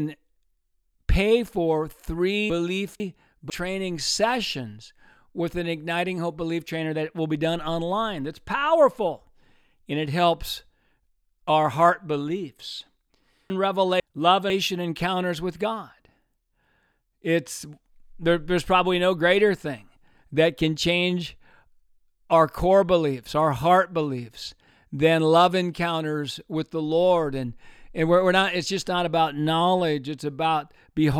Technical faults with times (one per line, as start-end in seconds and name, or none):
2.50-3.50 chunks out of order
13.50-14.50 chunks out of order